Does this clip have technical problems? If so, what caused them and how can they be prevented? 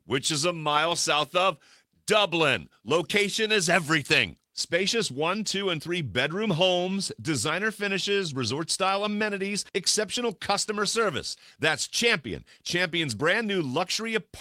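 No, the signal shows no technical faults at any point, so there is nothing here that needs a cause traced or a prevention step.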